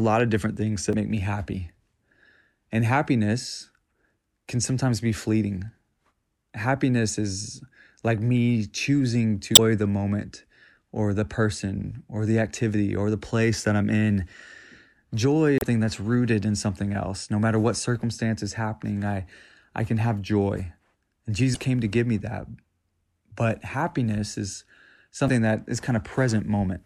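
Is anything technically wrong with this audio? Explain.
Yes. Brief glitches break into the speech at 0.90, 9.52, 15.58, 21.52 and 25.26 s, each lasting about 40 to 70 ms. This is damaged data in a compressed stream: corrupted bytes make the decoder misread those frames and lose sync until it finds the next valid header.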